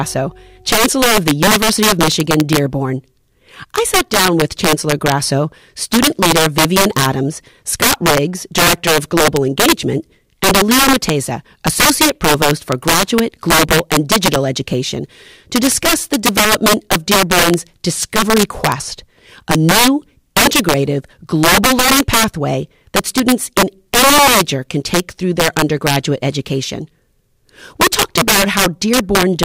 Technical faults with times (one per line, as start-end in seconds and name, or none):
0.00-29.44 integer overflow